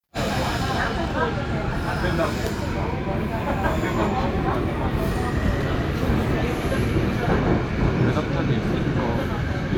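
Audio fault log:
No technical faults can be heard anywhere in this recording of sounds; the signal stays intact and continuous throughout.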